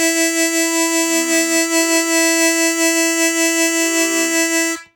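No technical faults can be heard anywhere in this music.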